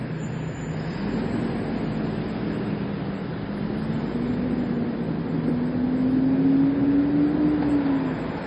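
A recording of everyday sounds carries heavy MP3 compression throughout, likely from a low-bitrate encode near 32 kbps. Nothing reaches above 10 kHz, giving a flat spectrogram ceiling with flickering, speckled gaps beneath and a swirly, watery texture.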